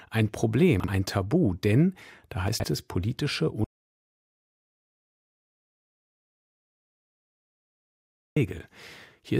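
At 0.80 to 0.88 s and again at 2.48 to 2.64 s, just before "es politische", there are chunks out of order. A 40 ms chunk plays one chunk late in the first case and three late in the second. No audio is lost, but the sequence is wrong. The short stretch sounds jumbled.

From 3.64 to 8.36 s, after "es politische", an audio dropout to silence removes about 4.72 s. The sound cuts off to silence with no room tone, likely because the input signal was lost while recording continued.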